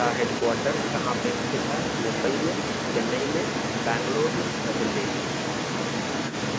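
From the very start and throughout, a second voice runs underneath the main talker, only a little quieter than the speech itself, so the two compete rather than one clearly dominating. This is the other side's voice leaking through, most likely because the talker's device was playing the far end on a loudspeaker and the echo canceller left much of it in the microphone signal, which was band-limited to nothing above 8 kHz by the call processing.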